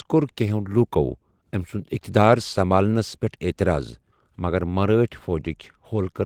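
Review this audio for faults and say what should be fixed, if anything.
Nothing stood out on listening, so there is nothing here that needs fixing.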